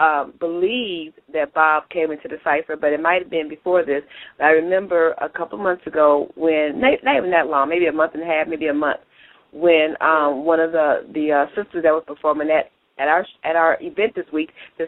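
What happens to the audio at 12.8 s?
Nothing goes wrong at 12.8 s; the audio plays through that moment intact, with no dropout, click, glitch or other fault to be heard.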